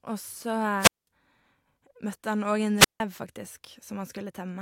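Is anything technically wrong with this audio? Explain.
Yes. There are two wireless microphone squelch dropouts, at 0.78–1.07 s and 2.77–3.00 s. The radio link fades, hiss rises, and the receiver's squelch mutes for about 200 ms, then about 160 ms. A spectrogram shows broadband noise, then a blank column; the waveform flatlines before speech resumes.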